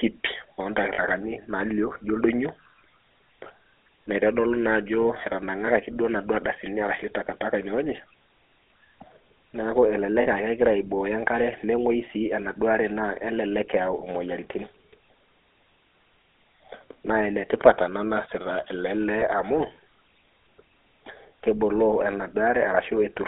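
It's a speech recording run through the GSM full-rate codec the whole way, and the codec damage is plainly audible: a buzzy, gravelly roughness laid over the voice, because the codec rebuilds speech from a vocal-tract model fed by a sparse, regularly spaced pulse excitation rather than the real waveform. The band sits at roughly 300 Hz to 3.7 kHz, so there's no top end or deep bass, and the coarse grain fits GSM's 13 kbps. On top of that there are three short dropouts where lost GSM frames were patched by repeating the last good frame, so instead of a gap you get a brief rough, metallic ring. These come at 0.94 s and 10.22 s, each lasting about 50 ms, which fits two lost frames, and at 19.2 s, a shorter one of about 40 ms. All three are too short for the repeated sound to be cut to silence, so each registers as a quick metallic blip.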